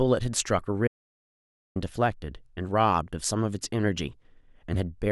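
At 0.88 s the speech cuts out mid-flow. It returns at 1.76 s. This is an audio dropout to silence. The gap is silent, with no room tone. About 0.88 s of speech is lost. The input was likely disconnected or muted while recording continued.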